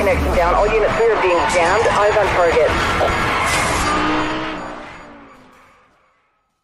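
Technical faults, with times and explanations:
No technical faults can be heard anywhere here.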